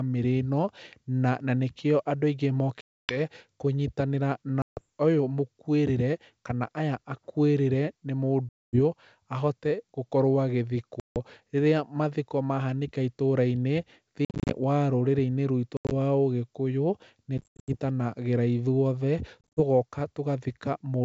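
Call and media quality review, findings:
Packet loss on an ADPCM call (G.722 path, 64 kbit/s): hard-edged silent gaps, then slightly distorted re-entry while predictor and step size resync over tens of ms. Unlike concealed loss, nothing fills the hole.

Solid gaps: 2.81–3.19 s (280 ms), 4.62–4.81 s (150 ms), 8.49–8.79 s just after "kana aya akuĩrĩre nĩ" (240 ms), 11.00–11.17 s (160 ms).

Bursty, scattered drops: 14.25–14.54 s (180 ms lost, runs to 50 ms), 15.77–15.92 s (110 ms, runs to 80 ms), 17.38–17.71 s (220 ms, runs to 80 ms), 19.41–19.61 s (110 ms, runs to 40 ms).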